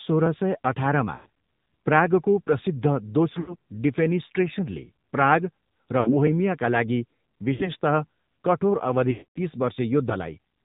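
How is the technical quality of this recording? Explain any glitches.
Quality's pretty rough. It has a phone-call sound throughout, plus a handful of short dropouts.

AMR narrowband mobile codec, the whole clip: the speech is squeezed into an 8 kHz-sampled band, so nothing above 4 kHz survives. It sounds buzzy and synthetic, which fits a low AMR-NB mode around 7.4 kbps. That mode models the vocal tract with very few pulses per frame.

Lost AMR speech frames happen at 1.16–1.27, 3.40–3.55, 6.00–6.15, 7.54–7.69 and 9.12–9.39 s, with losses of 100, 80, 60, 60 and 240 ms. The decoder repeats its last good pitch and filter settings with falling gain, so you hear a smeared warble. The longest gap fades toward silence before the speech comes back rough.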